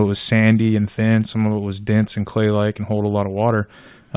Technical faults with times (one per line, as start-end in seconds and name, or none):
none